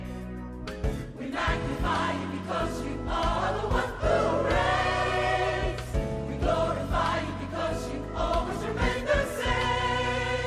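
No faults can be heard anywhere in the clip.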